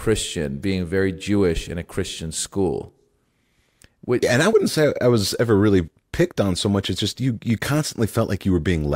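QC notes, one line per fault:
4.53 s and 6.99 s, compressed frames skipped: a single compressed frame of about 32 ms was dropped each time, between "yeah and I" and "say I was ever" and again just before "just you you". The speech jumps ahead by roughly one frame at each join.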